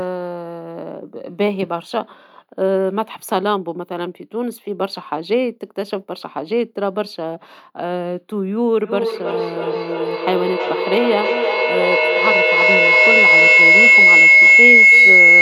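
A speech recording with feedback howl from 8.84 s to the end. Sound from a loudspeaker reaches a microphone in the same room and is sent back out louder each trip. The repeats grow rather than fade. They narrow to a tone around 2 kHz, where the loop has the most gain. The repeats come roughly 300 ms apart, the loop's delay. It peaks about 9 dB above the speech and never breaks off.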